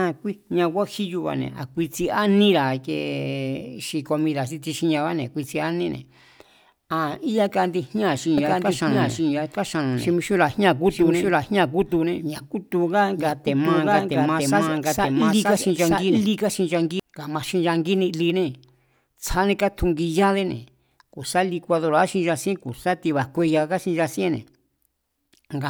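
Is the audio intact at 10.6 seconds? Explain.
No. At 10.6 seconds the speech is caught in a doubled audio track, from 8.38 to 17.0 seconds. A second full-band copy runs about one second behind, at roughly equal level. Likely cause: a slower capture path recording the same audio again. The copy starts and stops abruptly.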